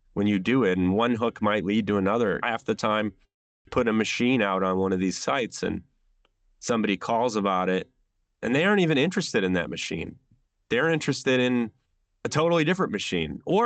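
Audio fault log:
3.25–3.69 s, long network dropout: Right after "the time" the sound breaks off. The last sound carries on briefly as a fading buzz, then about 370 ms of near-silence follows before speech resumes with roughly 400 ms of material simply gone. This is likely a network dropout that the receiver papered over with concealment. On a waveform the envelope decays into a flat gap. On a spectrogram, smeared harmonics fade into an empty band with no speech onset.
3.80–4.24 s, jitter buffer slow-down: Just after the gap the speech runs at about 92% speed while keeping its pitch. The receiver is rebuilding its buffer reserve by repeating single pitch periods, adding about 43 ms in total. Sounds are drawn out. On a spectrogram the harmonics stay level in frequency but stretch in time, and the waveform shows near-identical cycles repeated in a row.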